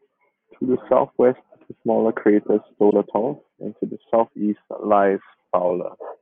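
A corrupt frame decoded at 2.90 to 2.93 s, just after "is the smaller crater": damaged bits in what seems to be a single compressed frame were played anyway, so misread values placed energy at wrong frequencies, producing a brief, loud burst peaking around -5 dBFS.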